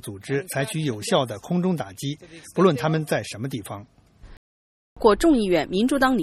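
At 4.37 s the audio cuts out abruptly in mid-flow and stays silent for about 0.6 s before sound returns at 4.97 s. That gap is a playback stall, most likely the player's output running dry because data stopped arriving or its playback thread was briefly blocked.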